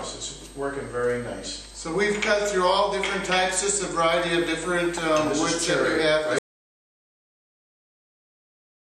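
The input signal was likely lost at 6.39 s, giving an audio dropout to silence: the sound stops abruptly and dead digital silence, without room tone, runs to the end.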